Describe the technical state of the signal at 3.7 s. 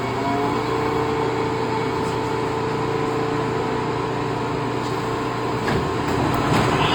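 Opus compression is audible at 3.7 s and runs the full length of the clip. The damage is likely from an Opus encoder in its music (CELT) mode, working at a rate that fits roughly 24 kbps. With too few bits, it keeps each band's energy but fills the detail by folding lower bands or injecting noise. Tonal parts turn rough, grainy and noisy rather than swirling, while the bandwidth stays full, reaching about 20.1 kHz.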